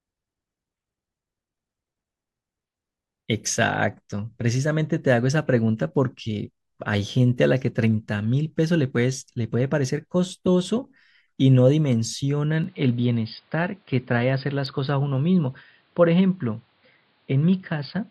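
At 12.64 s the recording input was likely switched to a poorer device, which holds to the end of the speech. Nothing above 5 kHz gets through, so the sound turns dull and boxy, with no gap at the switch, a similar level, and a faint new noise floor roughly 40 dB down.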